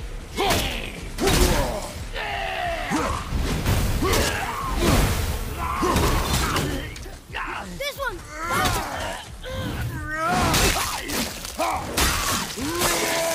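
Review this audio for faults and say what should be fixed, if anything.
Nothing here needs fixing; I listened all the way through and couldn't pick out any faults at all.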